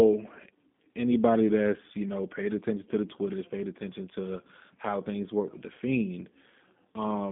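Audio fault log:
throughout: G.729 codec. The speech has a rough, slightly synthetic edge that is plainly audible. Nothing sits above 3.8 kHz, and the line band runs from 150 Hz to 3.6 kHz, so the voice sounds narrow and telephone-like. The codec rebuilds each 10 ms frame from a vocal tract filter, a pitch predictor and a few pulses. Fine detail is lost, giving the grainy texture. This fits an 8 kbit/s G.729A stream.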